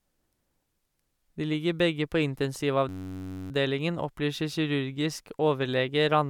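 From 2.89 to 3.51 s the system froze while the sound hardware kept replaying its ring buffer, a system hang loop. One 10.67 ms slice, which fits a 512-sample buffer, repeats exactly, replacing the speech with a steady 93.8 Hz buzz.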